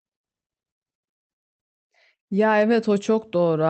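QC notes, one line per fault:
Throughout: clock drift between sender and receiver. The sending clock runs roughly 3% slow against the receiver, so the jitter buffer is slowly starved and the receiver must pad the stream with extra material to keep playing. The result is a faint unevenness in timing across the whole clip rather than one clear defect, with small hiccups landing at irregular points instead of a steady, even flow.
0.98–1.04 s and 2.15–2.22 s: short stall from a late packet, twice. Each time a packet missed its playout deadline and the buffer ran dry, so the receiver held the last sound for about 35 ms and then 39 ms before resuming exactly where it left off. Nothing is lost. What you hear is a brief sustained smear with a slight buzz or dip, and the delay grows by the held amount each time.
3.29–3.66 s: repeated timing corrections. Near the end the receiver inserts several short repeated slices to stay in step with the slow sender, adding roughly 40 ms in total. 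Playback over this stretch runs at about 92% speed, so the closing phrase is slightly slowed. The edits all stretch rather than cut, consistent with the drift direction, and their spacing is irregular. The Opus path's band limit near 8 kHz removes the top end above that.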